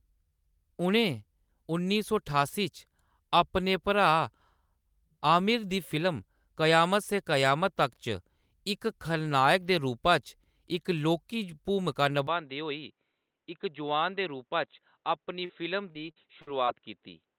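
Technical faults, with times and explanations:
12.27–17.39 s, input switched to a poorer device: the recording likely moved mid-stream to a lesser microphone or headset profile, with no gap at the change. Nothing above 4 kHz survives, so the sound turns dull and boxy, drops about 5 dB, and gains a faint new noise floor.
15.45–15.51 s, short concealed packet loss: roughly 40 ms of audio failed to arrive, and the decoder covered 37 ms of it by extending the preceding sound before rejoining the real signal. This leaves a brief smear or wobble that can swallow a short consonant.
15.91–16.69 s, repeated packet loss (robotic sound): five separate gaps, the longest 50 ms, took out 180 ms in total, and about 160 ms of that was patched by continuing the last sound. With a fifth of the span synthesized, the result is choppy, with fragments missing.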